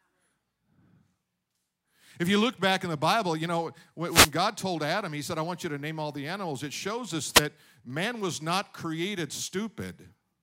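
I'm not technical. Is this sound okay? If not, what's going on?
No. There are two short bursts of static in this speech recording. The first runs from about 4.06 to 4.32 seconds. The second, shorter one runs from 7.32 to 7.42 seconds. This is called a wireless microphone noise hit. The radio link between the microphone and its receiver briefly weakened. When that happens, the receiver's own hiss rises for a moment.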